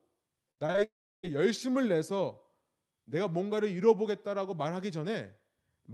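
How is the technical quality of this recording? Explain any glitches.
The recording has two network glitches close together near the start, heard over a call path whose highs roll off around 12 kHz.

From 0.51 to 0.82 s there is repeated packet loss (robotic sound). Short holes, the longest about 58 ms, are each patched by stretching the previous sound. This gives choppy speech with pieces missing rather than one continuous gap.

From 0.84 to 1.25 s the sound turns to a fading buzz or hiss and then about 0.33 s of silence before the speech resumes with the missing part gone. This is likely a long network dropout. It differs from the stretch before it because it is one long outage, not many brief ones.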